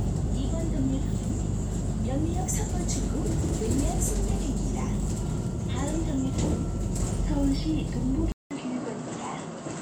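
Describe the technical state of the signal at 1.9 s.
Around 1.9 s the audio is intact, with nothing at that moment pointing to a break, dropout or other technical fault in the signal.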